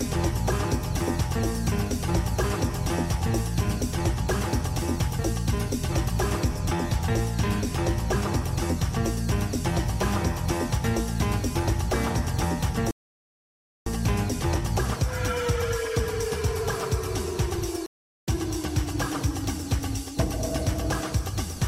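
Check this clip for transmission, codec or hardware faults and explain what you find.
Two rebuffering stalls interrupt the audio, at 12.91 to 13.87 s and 17.86 to 18.28 s. Playback exhausted its downloaded data and paused until more arrived, then continued exactly where it stopped, adding 0.95 s and 0.41 s. Each stall shows as a flat waveform line and a blank vertical band on the spectrogram.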